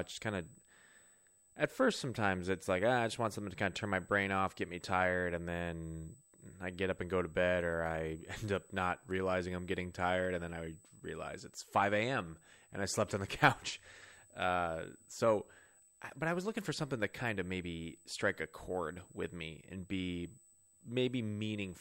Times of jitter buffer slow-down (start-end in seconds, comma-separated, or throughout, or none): none